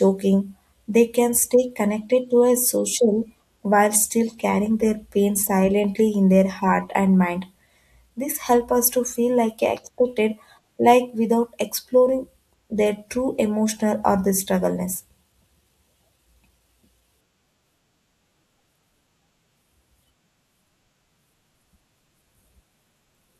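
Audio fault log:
0.19 to 22.89 s, clock slip clicks: two pieces of equipment in the chain are likely running on separate, unsynchronised clocks, with a mismatch of roughly 30 ppm, so each time the drift adds up to a whole sample, a single sample is dropped or repeated. In this speech the result is a faint, steady tick about every 0.7 seconds, around thirty in all, heard on louder voiced passages and lost in the pauses.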